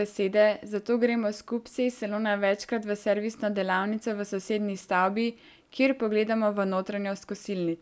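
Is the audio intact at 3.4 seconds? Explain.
Yes, at 3.4 seconds the speech runs on cleanly, with no dropout, click, distortion or other fault at that moment.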